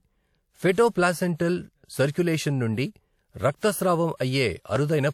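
A speech recording with four bursts of pre-echo. Each time, a short hiss runs ahead of a sharp onset, and the attack sounds smeared. The smears last 56 ms at 0.72 s, 38 ms at 1.36 s, 34 ms at 2.11 s just before "నుండి రక్తస్రావం", and 35 ms at 4.17 s just after "నుండి రక్తస్రావం". A transform codec causes this. It spreads coding noise across a whole block, so noise meant for the loud onset leaks into the quiet moment before it.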